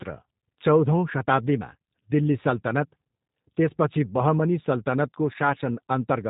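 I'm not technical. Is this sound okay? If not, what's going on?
No. G.729 codec damage runs through the whole clip, from start to finish. This phone-call codec saves data by not sending the speech itself. It sends a rough description of how the mouth and throat were shaped and the pitch of the voice, and the far end rebuilds the speech from that. Here the rebuilt speech is clear enough to follow but sounds rough and slightly artificial, and it is dull because nothing above about 3.8 kHz gets through.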